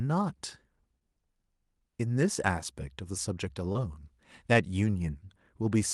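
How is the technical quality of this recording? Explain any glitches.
The recording has two brief glitches, both short concealed packet loss on a call path whose top end stops near 12 kHz, which fits Opus running at about 32 kbps. At 0.99 to 1.03 s and again at 3.73 to 3.77 s, roughly 20 ms of audio failed to arrive in time. The receiver covered each gap by extending the preceding sound, then crossfaded back into the real signal. Each one is heard as a tiny smear or wobble, not a hard silence or click, which is what separates it from an uncovered dropout.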